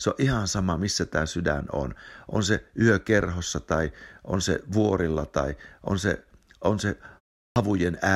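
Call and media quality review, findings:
Clipped start after a pause at 7.46 s: speech jumps in abruptly, first 100 ms lost after 0.34 s of silence. Output device sleeping through the gap, slow to wake.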